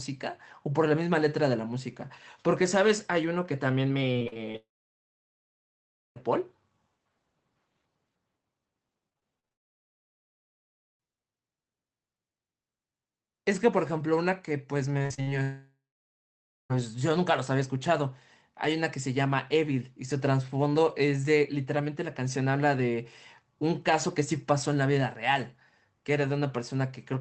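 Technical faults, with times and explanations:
4.13–4.56 s, repeated packet loss (robotic sound): six short gaps, the longest about 35 ms, are each patched by extending the previous sound, so roughly a third of this stretch is concealed and the speech turns choppy, with about 160 ms missing.
4.56–6.18 s, long network dropout: about 1.6 s of audio never arrives, likely a network outage; the concealment buzz fades almost at once and about 1.5 s of silence follows before speech resumes with the lost part gone.
9.10–9.53 s, repeated packet loss (robotic sound): six gaps, the longest about 37 ms, are filled by repeating the last sound, concealing just over a quarter of the span and giving a broken, robotic texture with about 140 ms of speech lost.
9.53–11.04 s, long network dropout: roughly 1.5 s of audio goes missing, likely from a dropped connection; the filled-in tail dies away quickly, leaving about 1.45 s of silence, and speech returns further on without the missing portion.
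14.98–15.31 s, repeated packet loss (robotic sound): five gaps, the longest about 52 ms, leave over half this short span concealed by continuing the previous sound, so it is heavily choppy, with about 180 ms of speech lost.
15.42–16.72 s, long network dropout: about 1.3 s of audio is lost, likely a network outage; the concealment carries on for a few tenths of a second as a decaying buzz, then about 0.93 s of silence, before speech resumes with the gap unrecovered.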